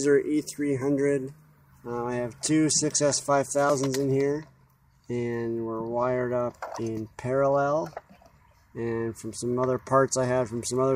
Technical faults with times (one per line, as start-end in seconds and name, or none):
none